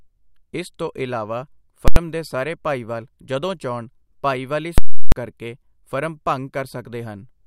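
Invalid numbers at full scale hit the speech from 1.88 to 1.96 s, right after "ਇਸ ਤੋਂ ਇਲਾਵਾ", and again from 4.78 to 5.12 s, after "ਚਾਹੁੰਣ ਭਾਈਵਾਲੀ". A calculation returned infinite or invalid values that were pinned to the extreme sample value, holding the output flat at one extreme value, far beyond the speech peaks, for a whole block. The 85 ms block, which fits 4096 samples, lands as one loud bang. The 341 ms block, consistent with 16384 samples, gives a violent pop, a gap with no sound, then another pop before "ਕਰਕੇ ਫਰਮ".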